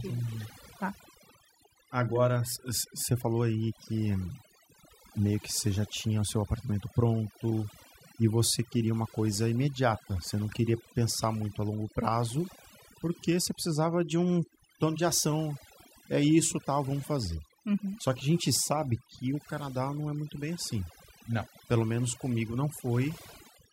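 Overdone noise removal runs throughout the speech. A noise reducer set too aggressively pulls individual frequency bands down whenever they sit near its noise estimate, taking quiet vocal detail with them, so the background drops and breaks up into twinkling specks.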